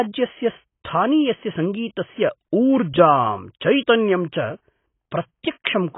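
Throughout, the speech is dull and warbly, and a spectrogram shows nothing above 3.8 kHz. The likely cause is heavy AAC compression, consistent with a bitrate near 16 kbps. At 5.43 s there is pre-echo: quantisation noise spread across the codec block puts a short hiss about 11 ms before an attack. It shows as a smear just ahead of the waveform's onset.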